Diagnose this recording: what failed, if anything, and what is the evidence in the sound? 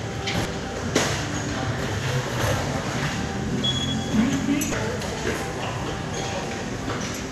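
The compressed stream feeding playback was corrupted: damaged data in a compressed stream made the decoder misread frames, lose sync and hunt for the next valid header. Each time, a brief disturbance breaks into the audio, at 0.42–0.45 s, 2.38–2.41 s, 4.71–4.74 s and 6.40–6.44 s, each about 33 ms long. That length fits damaged codec frames being replaced by garbage before the decoder locks on again.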